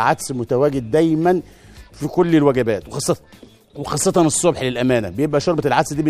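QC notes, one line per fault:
No faults found.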